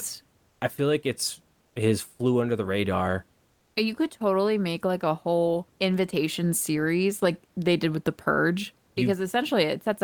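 At 0.51, 1.67 and 3.51 s the room's background briefly turns into a flat, featureless hiss. This is comfort noise in place of the background. It is likely from discontinuous transmission during pauses. The first two gaps last 80 ms, before "I feel like it's" and before "his flew under the". The third lasts 240 ms, after "flew under the radar". The substitute sits about 1 to 3 dB below the real room noise.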